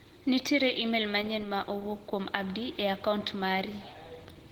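A speech clip with plainly audible codec damage from start to finish: the voice sounds hoarse, grainy and muffled, with a rough, noisy texture in place of clean harmonics. This is likely Opus compression running in its hybrid speech mode, at a low rate that points to around 16 kbps. On a spectrogram, energy still reaches about 20.2 kHz, but the harmonics above the lower band look smeared into noise-like texture.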